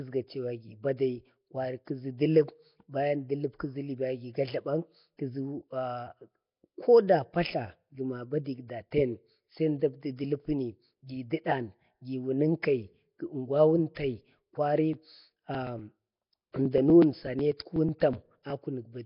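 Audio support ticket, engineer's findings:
Whole clip: rough, hissy, smeared underwater speech, heavy codec damage, nothing above 5.3 kHz. Likely Nellymoser compression, coarse fixed bits per block, empty bands noise-filled, about what you'd expect around 22 kbps. Needs a better codec upstream.

Pre-echo at 13.95 s: short hiss ahead of a sharp attack, smearing it over about 19 ms. Transform codec spreading block quantisation noise into the quiet bit before the onset.

Periodic USB or driver dropouts, 14.93 to 18.50 s: regular ticks every 0.123 s, around thirty of them, each skipping roughly 2 ms of audio outright. Fixed-interval stall from a background task on the bus or driver. Worth checking what's polling.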